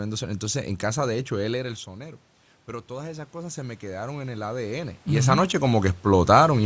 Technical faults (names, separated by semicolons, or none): automatic gain rising